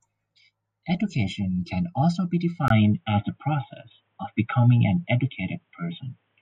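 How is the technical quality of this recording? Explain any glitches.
There's one real glitch. At 2.68 s, right after "can also be", a 20 ms gap lands and everything after it is dull, capped at 3.8 kHz, shifted about 5 dB, with faint new background noise. That's likely the input switched to a poorer device, narrower-band mic.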